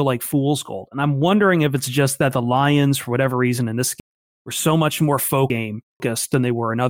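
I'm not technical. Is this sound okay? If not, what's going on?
No. Right after "whatever reason in this", from 4.0 to 6.0 s, chunks play out of order. One half-second piece arrives three pieces late, jumbling the speech.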